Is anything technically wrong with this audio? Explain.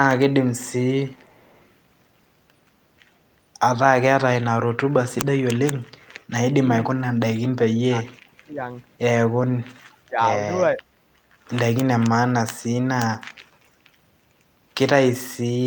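Yes, there are two kinds of fault in this speech.

Echo leak: from 0.54 to 0.72 s and again from 1.10 to 1.71 s, a faint, delayed copy of the speech trails behind it, lagging by about 0.48 s and sitting roughly 30 to 35 dB below the main signal. It sounds like a ghost of the talker returning half a second late. The likely cause is a far end playing the call over a loudspeaker whose echo canceller let part of that sound back into its microphone and onto the line.

Speech suppressed in double talk: from 6.86 to 8.60 s, then briefly at 9.70 to 9.87 s and 10.08 to 10.19 s, the talker's level sinks sharply and parts of the speech drop out. The deepest dips are about 30 dB in the first two stretches and about 20 dB in the last, with the first stretch affected for around one and a half seconds in total. This likely happens because both sides spoke at once, and the echo canceller, unable to tell real speech from loudspeaker echo, turned everything down.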